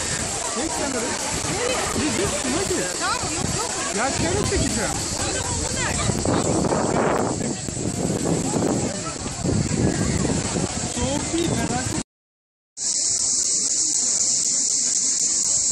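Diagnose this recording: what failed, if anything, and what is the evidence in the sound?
Periodic USB or driver dropouts. From 0.18 to 15.45 s, silent gaps of about 10 ms tick every 0.25 s. A stalled driver drops samples.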